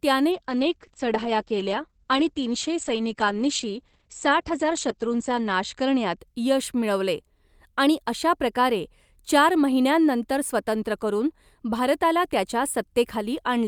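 From 0.32 s to 6.25 s the speech turns muffled and rough, with a watery texture and the top end missing, before clarity returns just ahead of "यश मिळवले आणि अशा". This is a call bitrate drop: the encoder's rate fell from 48 to 10 kbps and stayed at its lowest for about 5.25 s, coding the sound more coarsely and narrowing the bandwidth from 20 kHz to 8 kHz.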